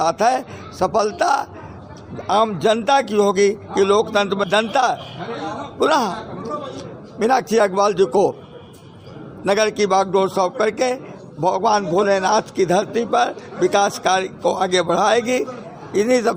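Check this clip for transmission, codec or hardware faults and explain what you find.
One fault turns up, at 4.43 s: a stream segment skipped. The sound jumps abruptly ahead with a small blip, likely because one segment failed to load and playback resumed at the next. Unlike a dropout, there is no silent gap; material is simply missing.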